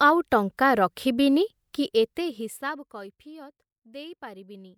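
Zipper noise runs from 1.79 to 3.23 s in this speech clip, just after "ଆଉ ଟଙ୍କା ରଖିବିନି". The level falls by about 20 dB in unsmoothed 1 dB steps, around fifteen per second. Each jump leaves a small click, heard as a ticking zip over the fade.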